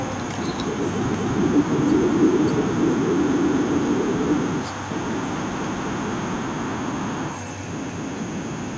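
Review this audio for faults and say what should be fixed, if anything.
Echo with no canceller runs through the whole clip. The far end is playing this speech on a loudspeaker, its microphone picks it up, and the call sends it back uncancelled. Each phrase is trailed by a quieter, thinner copy about 20 dB down, arriving around a fifth of a second later. Preventing it means enabling acoustic echo cancellation on the far-end device, or having that side use a headset.

Overlapping chunks produce a stutter at 1.14–1.39 s, 3.39–3.64 s, 5.64–5.89 s and 7.89–8.14 s. At each join the same 250 ms of speech plays twice, once at the end of one segment and again at the start of the next. The regular spacing points to fixed 2-second processing chunks, each starting 250 ms before the previous one ended. Preventing it means making chunk boundaries abut exactly, or crossfading and trimming the overlap instead of playing it twice.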